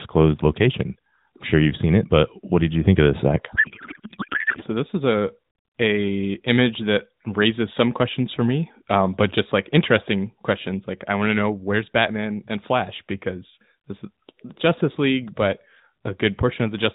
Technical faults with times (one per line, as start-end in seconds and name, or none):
3.56-4.64 codec payload misread